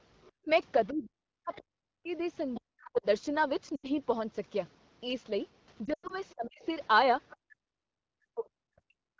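From 0.23 to 1.61 s a faint second voice sits under the speech, about 25 dB below it. This is the other side's voice leaking through, most likely because the far end's loudspeaker output reached this microphone and the echo canceller left a residue.

Overlapping it, between 0.45 and 3.05 s, the main talker dips sharply for about a second and a half in total, with the deepest drops around 40 dB. This is speech suppressed in double talk. The canceller likely could not tell the local voice from the echo while both sides spoke, so it pulled everything down. The other voice returns at about 20 dB below the speech from 2.54 to 2.9 s.

At 3.76 to 3.89 s and again from 5.85 to 6.14 s the sound briefly fades. These are lost AMR speech frames. Radio errors corrupted frames, and the decoder stretched the last good sound with falling gain. The first gap is 80 ms. The second scatters 140 ms of loss over 240 ms, with a longest run of 100 ms. 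Compared with suppression, these are shorter and fall to near silence within two frames rather than a clean level drop.

From 6.3 to 7.37 s the leaking voice returns at about 25 dB down. From 6.34 s to the end, double-talk suppression again cuts into the talker for about two seconds in total, down by up to around 40 dB.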